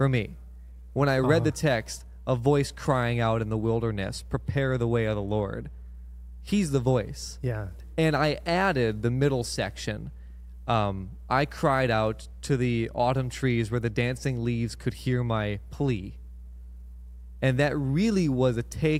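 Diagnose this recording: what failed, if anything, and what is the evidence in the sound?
Mains hum from the analogue wiring runs under the speech from start to finish: a steady 60 Hz tone, fairly loud against the talker. A ground loop or nearby transformer is leaking the power line in. Unlike rumble, it holds one fixed pitch.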